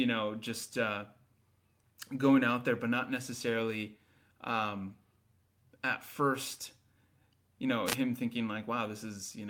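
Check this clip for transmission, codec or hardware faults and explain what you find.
Two faults stand out, one from transmission and one from the radio link.

From 4.51 to 4.53 s, just after "there but not necessarily", there is a lost packet rebuilt from error correction. About 20 ms was lost, which fits a single packet. The next packet carried a low-bitrate copy, and the decoder played it. There is no gap, but that moment sounds briefly rougher and noisier.

From 7.85 to 7.96 s comes a wireless microphone noise hit. The FM radio signal faded as reflections cancelled each other. Receiver noise rose over the sound for about a tenth of a second. It is heard as a short swish of static.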